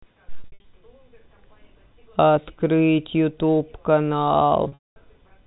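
Packet loss with pitch repetition hits at 0.43–0.64 s and 4.64–4.96 s. The receiver repeats the last pitch period to fill the gaps, so the speech turns briefly buzzy and held. In the first event, about 180 ms is lost in runs of up to 60 ms. In the second, 280 ms is lost, including a 220 ms stretch long enough to fade into silence, all heard through G.711 telephone coding's 4 kHz ceiling.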